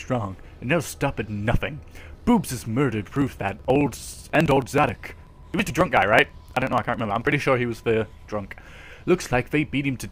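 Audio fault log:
3.05–7.32 s, periodic USB or driver dropouts: something stalls the audio path every 54 ms, skipping around 10 ms each time, so you get a steady rattle of ticks.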